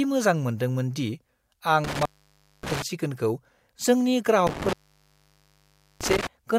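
At 1.84 s the speech drops out on an intermittent contact, a loose cable or plug briefly losing connection. Crackle marks the break and the return, and the signal stays open for about 0.58 s, leaving faint hiss, before recovering by 2.82 s. The same fault recurs from 4.47 s to 6.27 s with a longer gap of about 1.28 s, again bracketed by contact crackle with hiss in between.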